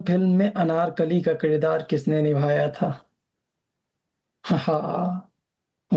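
Gain pumping runs throughout the speech: the gain ducks by around 10 dB under louder syllables, squashing loud and soft passages together. This likely comes from input gain set far too high, with a fast limiter repeatedly clamping it.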